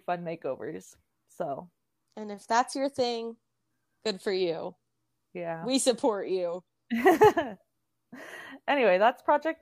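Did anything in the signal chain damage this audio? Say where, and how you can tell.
No, nothing along the chain, from capture through to playback, left any audible damage on this speech.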